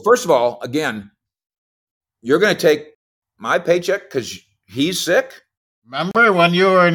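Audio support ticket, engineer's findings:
Speech drops to dead silence 6.11–6.15 s, about 35 ms, then resumes. Bluetooth stall likely: headset buffer ran empty while interference held packets for resend.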